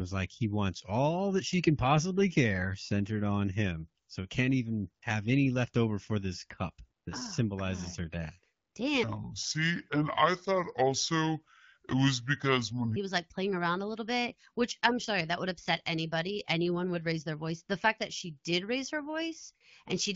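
From 9.03 to 12.96 s the speech plays as a section at the wrong speed, at 0.61 times normal, so it drags and drops roughly ten semitones, likely from a clock mismatch, until "he was like playing".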